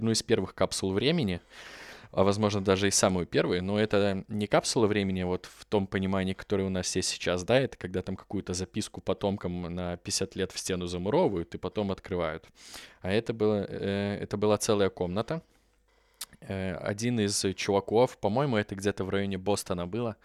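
Nothing technical goes wrong anywhere in this speech recording, so there's no fault to point to, no time to flag and no cause to explain.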